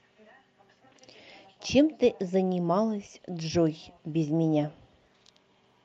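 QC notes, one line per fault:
No fault found.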